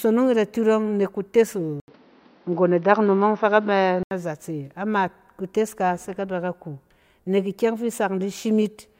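The input was likely switched to a poorer device from 1.8 s to 4.11 s, with the recording path handing over to a narrower-band microphone. After a gap of 80 ms at the switch, nothing above 6.1 kHz gets through, so the speech turns dull and boxy. The level shifts by a few decibels, and a faint new background noise sits roughly 40 dB under the speech. At 4.11 s the fuller, clearer sound returns.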